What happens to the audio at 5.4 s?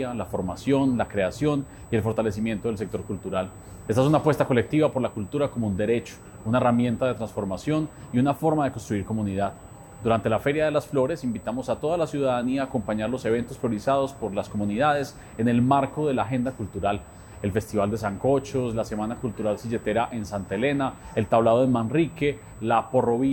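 At 5.4 s there's USB whine, the same as through the whole clip: a steady, fixed-pitch tone at 8 kHz, roughly 30 dB under the signal. It's the bus's 125-microsecond microframe current pulses leaking into the audio through the power or ground.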